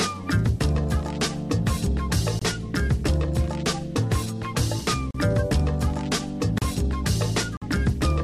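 Short holes interrupt the sound at 2.39 s (23 ms), 5.11 s and 6.58 s (35 ms each), and 7.57 s (46 ms). Each is a block of digital silence: the output dropped abruptly to silence and came back with no fade. The lengths fit whole buffers of 1024, 1536 and 2048 samples, which points to the program missing its deadline to fill the output buffer.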